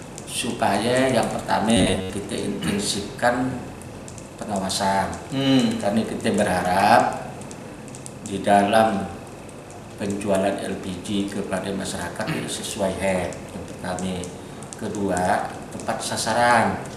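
From 1.77 to 2.10 s the sound turns into a rigid, metallic buzz near 93.8 Hz: robotic sound from repeated short buffers. Audio likely arrived too slowly, so a roughly 10.7 ms segment was looped, replacing about half the real signal.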